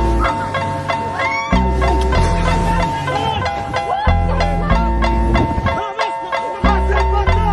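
Nothing here jumps out as a technical problem; the sound just runs along without any glitch or hiccup worth pointing to.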